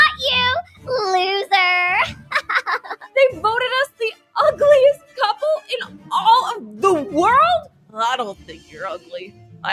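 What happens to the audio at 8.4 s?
From 8.35 to 8.77 s the sound is cut by the noise suppressor. A speech-oriented suppressor misreads this sound as noise and pulls it down by about 11 dB at its deepest, so the level sags and the decay is clipped short across roughly 0.4 s.

This sits within a wider fault, a noise suppressor applied to music or sounds. Steady and fading content is continually classed as noise, with gain swinging by around 10 dB, so held portions and tails thin out and pump while attacks pass largely intact.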